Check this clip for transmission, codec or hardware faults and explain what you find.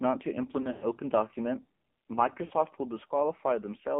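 Two faults are present: heavy mobile-codec coloration across the whole speech clip, and two bursts of lost frames.

AMR narrowband mobile codec (throughout): The speech has been squeezed into the narrowband AMR-NB codec, which rebuilds the voice from a vocal-tract filter and a sparse pulse excitation. Its heavy damage points to a low mode of about 5.9 kbps, leaving the voice buzzy and synthetic. The line band runs from 200 Hz to 3.6 kHz. On a spectrogram, everything above 3.6 kHz is an empty band with a hard ceiling, there is nothing below 200 Hz, and the harmonics look smeared and blotchy.

Lost AMR speech frames (0.62 to 0.87 s, and 2.46 to 2.52 s): Speech frames failed in transmission, so the decoder repeated its last good pitch and filter settings at falling gain. In the first event, about 120 ms went missing, scattered across 200 ms, with a longest run of 100 ms. The sound stretches into a warbling drone that fades and returns roughly. 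The second event is a 40 ms dip. On a waveform, these show as flattened, repetitive stretches with a decaying envelope. On a spectrogram, they appear as frozen harmonics.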